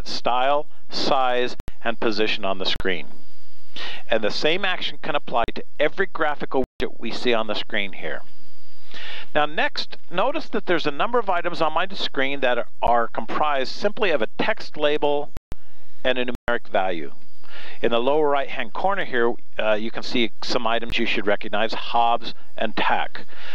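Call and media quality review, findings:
Block of digital silence, eight events: 1.60–1.68 s, 2.76–2.80 s, 5.44–5.48 s, 6.64–6.80 s, 12.87 s, 15.37–15.52 s, 16.35–16.48 s, 20.90 s. Hard cuts to silence. Tick at 12.87 s, holes up to 160 ms elsewhere. Probable component: audio output path. Buffer likely not filled in time.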